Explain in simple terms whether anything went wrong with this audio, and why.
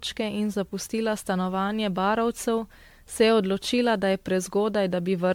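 Something did go wrong, and it affects the speech from start to finish. The sound is swirly and hollow, with a watery smear over it, and the sharp starts of sounds come out blurred. This points to generation loss: the audio was likely squeezed with a lossy format like MP3 and unpacked again many times over, perhaps around ten, with each round adding fresh damage. A single low-quality save would sound dull or slightly fizzy, but not this layered and muddled.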